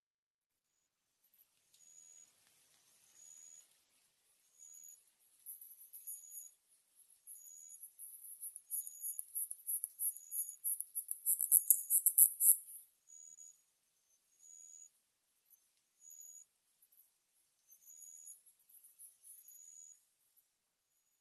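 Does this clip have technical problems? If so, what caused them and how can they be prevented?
Yes. The noise suppressor cuts the sound at 6.7–7.27 s, 15.36–15.79 s, 16.66–17.7 s, 18.47–19.24 s, 20.2–20.45 s and 20.95–21.17 s. It treats sustained passages as noise and pulls them down by about 5 to 9 dB, lowering their level and shortening their decays. Reducing the suppression strength or slowing its gain changes would prevent this.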